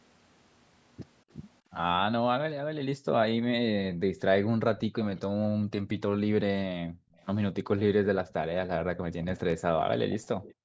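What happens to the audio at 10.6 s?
Just before that point, from 10.42 to 10.54 s, a faint copy of the speech trails the original by 260 ms. This is likely an echo leak: the far side's loudspeaker played the call, and its echo canceller let part of that sound back through the microphone.

From 10.54 s to the end at 10.64 s, the room sound drops away by about 40 dB for roughly a tenth of a second. This is background gated by the echo canceller: it cut the microphone sharply while it judged the loudspeaker to be active.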